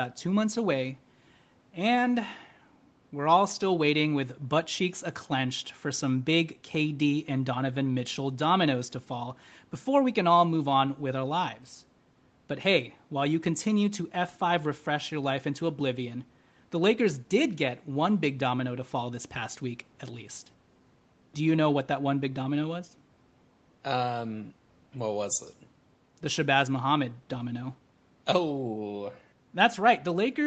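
No technical faults can be heard anywhere in this speech. It carries the marks of a working call path, with the lowest bass trimmed by the microphone processing and nothing above 8 kHz after the Opus codec at 20 kbps.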